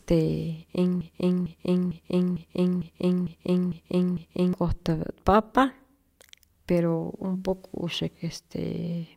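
From 1.01 s to 4.53 s the speech falls into a broken-record loop. A single fragment about 0.45 s long replays eight times back to back, each copy identical. The speech that should have filled those three and a half seconds is lost. The likely cause is a stalled player, encoder or stream resending the last piece it held. Unlike an echo, the repeats neither fade nor overlap. Unlike a momentary stutter, the cycle persists for seconds.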